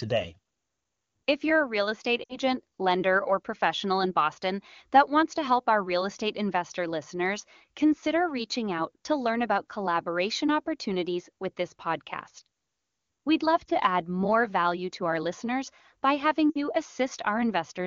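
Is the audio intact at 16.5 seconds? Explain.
No. From 16.50 to 16.60 s, just after "our listeners by having", there are lost AMR speech frames, consistent with about three 20 ms frames dropped. The wideband decoder repeats its last pitch and vocal-tract settings with decaying gain, so the sound drops to near silence within two frames. On a spectrogram the harmonics freeze into flat stripes that dim. On the waveform the envelope sags before speech resumes weak or rough for a moment.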